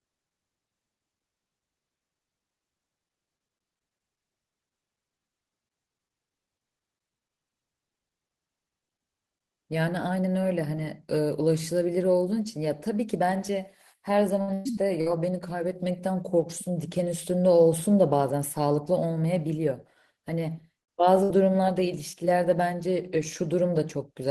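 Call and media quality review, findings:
Burst of packet loss, speech, at 14.41–14.51, 14.54–14.68, 15.01–15.09, 20.82–20.90 and 21.23–21.32 s. Receiver concealment stretches last sound into held buzz or fading hiss, then jumps ahead; about 60 ms lost each, 120 ms at 14.54. Spectrogram: smeared, decaying harmonics, then abrupt onset.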